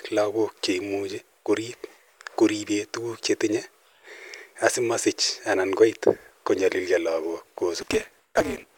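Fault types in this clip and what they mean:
Block size mismatch (truncated): from 7.81 s to the end, the end of each oversized block is dropped, leaving a 188 Hz buzz and speech 1.88 times faster at near-normal pitch.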